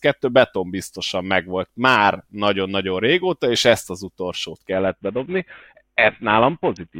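Bluetooth SBC bit pool drop at 4.72 s, right after "és ezt az utolsót", lasting to the end: the speech loses its treble and turns gritty as the upper sub-bands starve and the rest are coarsely quantised, which fits a bit pool falling from 28 to 4, near 48 kbps.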